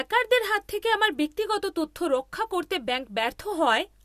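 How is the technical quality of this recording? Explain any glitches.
No glitches or faults heard.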